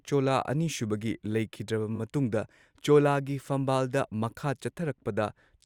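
At 1.95 to 2.00 s, repeated frames: a single 20 ms frame was decoded three times, adding 40 ms and producing a brief stutter in the speech.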